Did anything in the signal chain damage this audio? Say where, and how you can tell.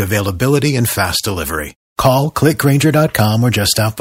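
No, nothing in the signal chain has audibly damaged this speech recording. Every stage from capture through to playback leaves no mark that can be heard.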